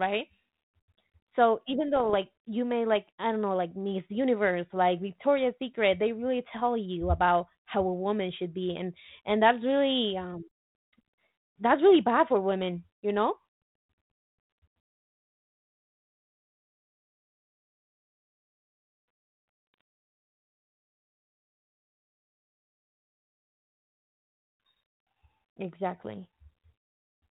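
From 1.96 to 2.14 s, the speech breaks into pops and a rough, gritty burst. These are bit errors on an ADPCM link. A few flipped bits throw off the decoder's step size and predictor, so each hit smears on for some milliseconds with brief jumps in level. The error rate is low, a fraction of a percent. A shorter burst follows from 19.74 to 19.81 s. The light, band-limited telephone sound around both points to G.726 ADPCM at the DECT rate.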